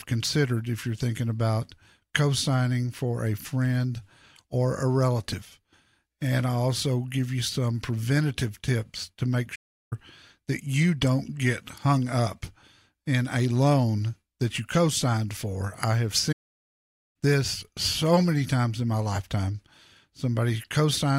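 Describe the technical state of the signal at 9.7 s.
At 9.7 s the speech sits inside a playback stall from 9.55 to 9.93 s: output goes silent for about 0.36 s, likely because the player ran short of data, then resumes.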